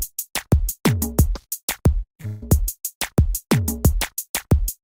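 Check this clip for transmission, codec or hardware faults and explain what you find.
One transmission fault stands out. From 2.10 to 2.43 s, repeated packet loss (robotic sound): four successive gaps, the longest 150 ms, were patched by extending earlier sound, leaving over half that stretch choppy.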